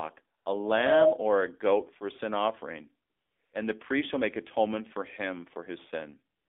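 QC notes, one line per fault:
Throughout: AMR narrowband mobile codec. The speech is squeezed into a telephone band of roughly 250 Hz to 3.5 kHz, with nothing above 4 kHz. At a rate that fits about 7.4 kbps, the vocal-tract model and sparse pulses leave a plainly buzzy, synthetic tone.
0.38–0.46 s, 3.08–3.52 s, 6.36–6.48 s: AMR comfort noise. In these pauses, lasting 80 ms, 440 ms and 135 ms, speech frames stop. A steady, smooth synthetic hiss replaces the real background and switches in and out. The longest gap is at 3.08 s.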